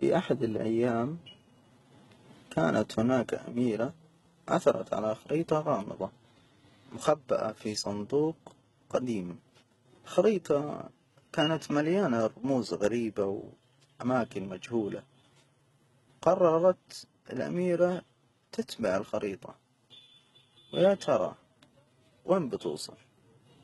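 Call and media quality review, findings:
HE-AAC compression, throughout. Speech sibilants gritty, metallic, lispy. Nothing above 11.8 kHz. Treble rebuilt from copied lower bands under a coarse envelope. Harmonics misaligned across the crossover. Heavy damage, fits roughly 16 kbps. Likely cause: low-bitrate HE-AAC encode in path.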